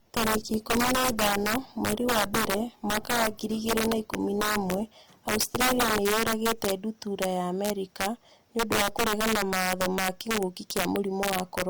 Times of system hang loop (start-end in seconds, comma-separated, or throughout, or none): none